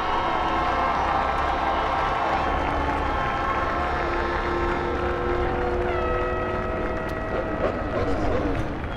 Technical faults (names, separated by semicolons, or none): none